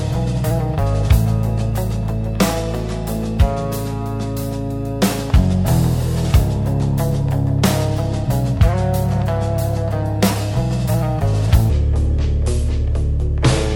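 At 11.70 s, a section at the wrong speed begins and runs to the end at 13.76 s. It plays at 0.656 times its proper rate. The sound drags and drops in pitch, roughly seven semitones low. The likely cause is playback against the wrong clock.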